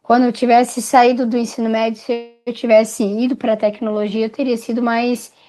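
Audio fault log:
2.13 to 2.49 s, call audio freeze: packets were likely held up in transit, so the jitter buffer ran dry and the receiver had nothing new to play. It carried the last sound forward as a fading buzz for about 330 ms, then about 20 ms of silence, before the speech resumed exactly where it had left off. Nothing is lost; the gap is inserted, and everything after it plays about 330 ms later.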